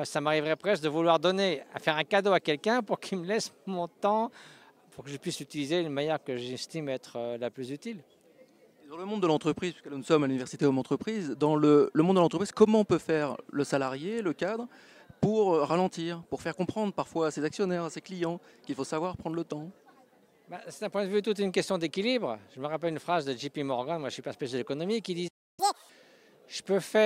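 A playback stall hits at 25.28 s: the audio cuts to silence for about 0.3 s, until 25.60 s, then resumes where it stopped, most likely because the player ran out of buffered data or its output thread was briefly blocked. Catch-up at higher speed follows from 25.60 to 25.90 s, as the player resamples its backlog at 2.0 times normal speed. The pitch jumps by roughly ten semitones to recover the lost time, then drops back to normal rate and pitch.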